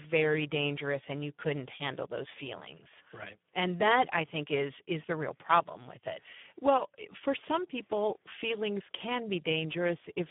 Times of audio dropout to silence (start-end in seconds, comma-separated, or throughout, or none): none